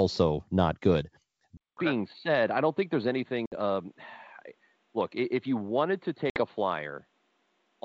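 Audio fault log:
1.57 s to the end, input switched to a poorer device: after a 200 ms gap the sound goes dull, nothing above 4.5 kHz, about 5 dB quieter, with new faint background noise, likely a different microphone or headset.
3.46 s and 6.30 s, packet loss on an ADPCM call: 60 ms hard-edged holes, fitting about three lost packets, then the decoder's out-of-step predictor brings audio back slightly distorted briefly.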